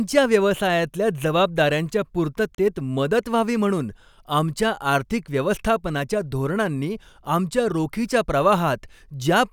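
A speech recording with one short Bluetooth stall, likely caused by radio interference delaying packets on the wireless link so that the headphones' playback buffer emptied before the retransmitted data arrived. With nothing left to play, the output drops to silence for about 33 ms, from 2.55 to 2.58 s, cutting the sound abruptly before it resumes once the delayed audio catches up.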